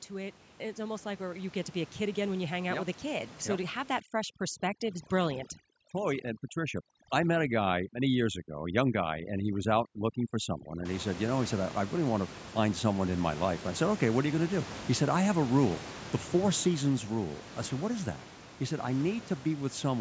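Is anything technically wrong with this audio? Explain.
Yes. Automatic gain rising occurs from 0.08 to 2.38 s and again from 5.09 to 6.89 s. The gain control judged the input too quiet and raised its gain gradually, by about 7 dB and then about 4 dB, so the speech and the room noise beneath it swell together over a couple of seconds.

Automatic gain falling occurs from 16.0 to 17.14 s. Here the control judged the input too loud and pulled its gain down by about 5 dB, so the speech starts loud and then sinks over roughly a second, with the background dropping in step.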